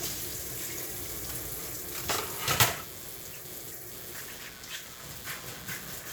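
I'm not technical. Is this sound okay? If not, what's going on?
No, there's computer activity noise the whole way through: a fast scratchy buzz, roughly 150 pulses a second, leaking in from the computer's electrical ground.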